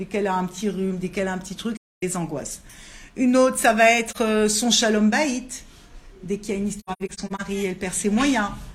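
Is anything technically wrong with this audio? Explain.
Yes. AAC frame loss with muting occurs at 1.77 to 2.03 s, 4.08 to 4.17 s, and 6.79 to 7.41 s, where it is scattered with the longest gap roughly a tenth of a second. The decoder zeroed the missing frames, about 43 ms each, and the overlapping windows fade the audio out and back in. The result is a brief dip for the single lost frame and soft-edged holes for the runs, unlike the abrupt, clicking cut of a raw sample dropout.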